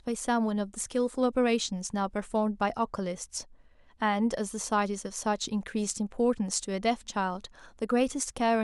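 No technical faults can be heard anywhere in this speech recording. Nothing interrupts or disturbs the sound at any point.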